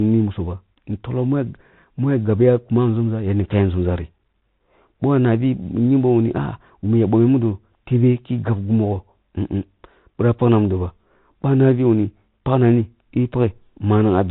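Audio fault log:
throughout, Bluetooth CVSD headset codec: dull speech capped at 4 kHz, scratchy s sounds, granular hiss, from coarse one-bit up/down coding, which fits a 64 kbps link.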